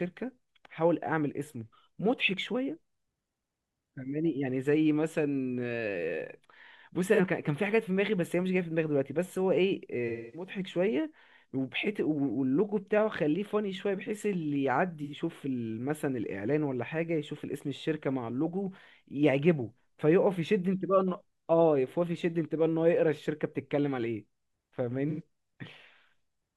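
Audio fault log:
7.14 to 25.22 s, AAC frame loss with concealment: brief smeared, phasey blips at 7.14, 15.03 and 25.10 s (43 to 85 ms), plus a longer 256 ms smear at 10.08 s, where the decoder fills the missing frames from the last good spectrum.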